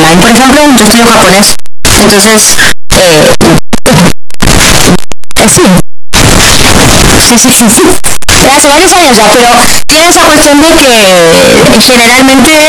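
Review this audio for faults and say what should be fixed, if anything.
Throughout, very loud, harsh distortion makes soft sounds as loud as strong ones, unlike clipping: signed and unsigned are likely mixed up, flipping each 16-bit sample's top bit. Declare the sample format explicitly at every read and write stage so the signedness matches from end to end.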